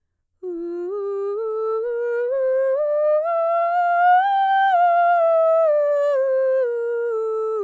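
No technical faults turn up anywhere in this music recording. There is nothing here that calls for comment.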